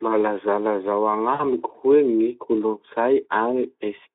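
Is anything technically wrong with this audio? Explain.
Yes. From 1.33 to 1.44 s there is VoIP packet loss concealment: about 60 ms of speech went missing, which fits three lost 20 ms frames. The decoder stretched the last pitch and filter into a buzzy tone or coloured noise that fades. Unlike a plain dropout, the gap is filled rather than silent, and the voice stays weak and smeared briefly afterwards. The Speex coding keeps the speech within a telephone-like 250 Hz to 3.5 kHz band, with light coding damage.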